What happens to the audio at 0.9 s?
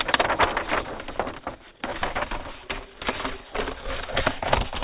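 Nothing goes wrong at 0.9 s; the audio carries on intact through that moment with no dropout, click or distortion.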